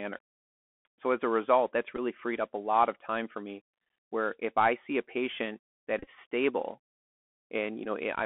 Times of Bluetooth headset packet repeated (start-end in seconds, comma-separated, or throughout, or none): 1.97-2.00, 5.99-6.08, 7.84